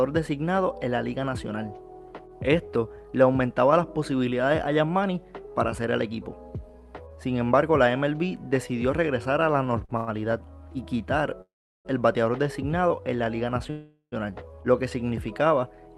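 Audio carried over a call link, with an Opus-style codec whose content stops at a 12 kHz cut-off and whose coding noise fits a rate near 40 kbps, shows two kinds of jitter-buffer fault. A short stall from a late packet occurs at 9.65 s (16 ms) and from 9.85 to 9.91 s (40 ms). In each, the receiver stretched the last sound until the packet turned up, then resumed without loss. On a waveform this appears as a brief repeated stretch with a slight buzz or dip. On a spectrogram it shows as a horizontally smeared, held sound. A call audio freeze, likely caused by packets held up in transit, follows at 9.97–10.09 s (105 ms, filled with a fading buzz or hiss and no silence), 11.41–11.87 s (434 ms, of which 370 ms is silent) and 13.70–14.14 s (417 ms, 80 ms silent). Each inserts a gap before playback continues where it stopped. In the two longer freezes a waveform shows a decaying buzz collapsing to a near-flat line, and a spectrogram shows fading horizontal streaks that end in an empty column.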